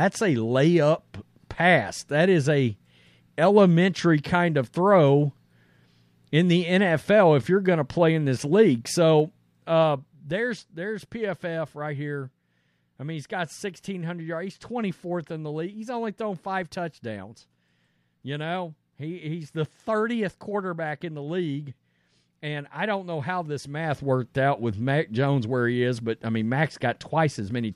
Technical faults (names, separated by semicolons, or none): zipper noise